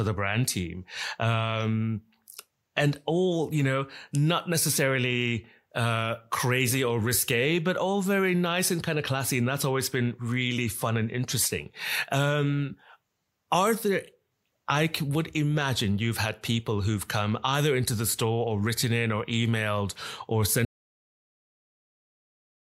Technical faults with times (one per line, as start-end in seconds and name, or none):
20.65-22.68 audio dropout to silence